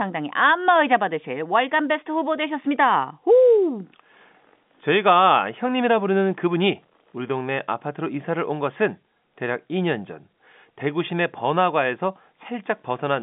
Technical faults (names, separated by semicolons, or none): none